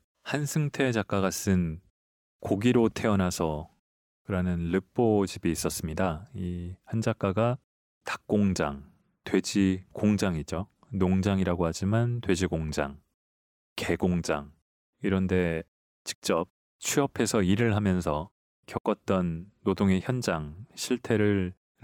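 Nothing in this speech recording stood out as a technical problem on listening.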